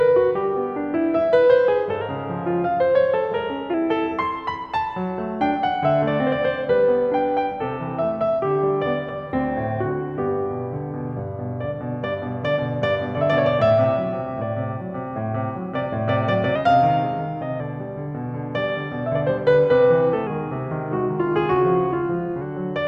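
At 2.01 s the music lurches about a semitone sharp and runs fast. At 3.74 s it snaps back. The same jump happens again from 16.56 to 17.60 s. From 20.27 to 22.41 s it goes the other way, slowing and sagging just over a semitone flat. Speed and pitch shift together, by 6.1 percent each time. This is a drift correction step. A clock-matching resampler likely changed its playback rate in one jump to refill or drain its buffer.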